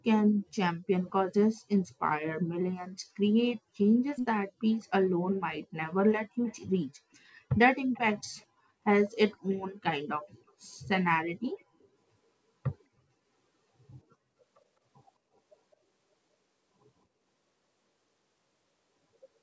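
It's a speech clip with an echo leak: short, delayed copies of the voice trailing about 207 ms behind, at 4.15–4.27, 6.44–6.6, 7.94–7.99, 8.19–8.46, 9.3–9.59, 11.59–11.64, 11.8–11.88 and 15.72–15.76 s. The first one is nearly as loud as the speech itself, while the rest are faint scraps well down in level. The likely cause is a far end on loudspeaker whose echo canceller let some of its mic pickup slip back into the call.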